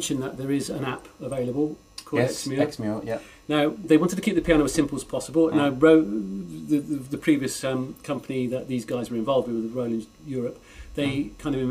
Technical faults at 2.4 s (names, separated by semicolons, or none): none